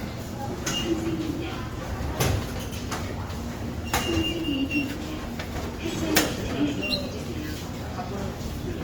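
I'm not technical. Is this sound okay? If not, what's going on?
No. From start to finish the sounds come across rough, grainy and noisy. The likely cause is Opus compression: squeezed hard, the music mode fills in the detail it cannot afford with folded copies and noise, giving that gritty texture while the full treble range is kept.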